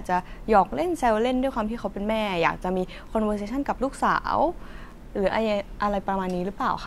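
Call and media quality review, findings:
No audible faults found.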